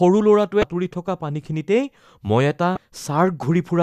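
At 0.60 s and again at 2.74 s the speech breaks into a brief glitch, each lasting about 30 ms. Both are damaged data in a compressed stream. Corrupt bytes make the decoder misread those frames and lose sync, then recover at the next frame header.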